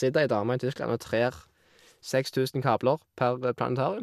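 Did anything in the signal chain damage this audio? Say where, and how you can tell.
No, nothing along the chain seems to have touched this speech; I can't hear any sign of damage at any stage.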